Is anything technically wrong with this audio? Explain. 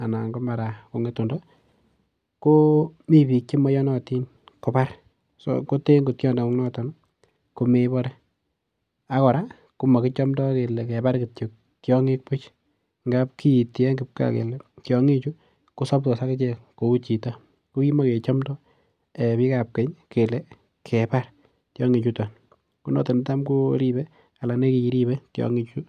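No, nothing is technically wrong.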